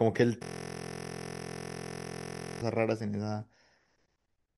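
Speech with a system hang loop from 0.43 to 2.62 s: one 23.22 ms slice repeats exactly, fitting a 1024-sample buffer, giving a steady 43.1 Hz buzz. Unlike a dropout or stutter, the sound neither gaps nor advances while the driver is frozen.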